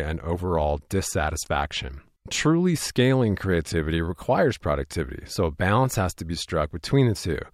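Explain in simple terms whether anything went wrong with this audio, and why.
Nothing went wrong here; the speech comes through without any glitches, dropouts or other problems you'd notice.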